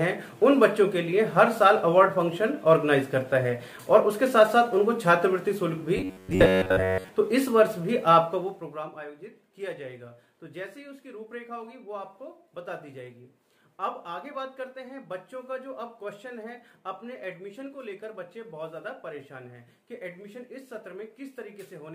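From 5.97 to 7.09 s, most of the audio becomes a rigid metallic 93.8 Hz buzz: robotic sound, likely from repeated short buffers of about 10.7 ms.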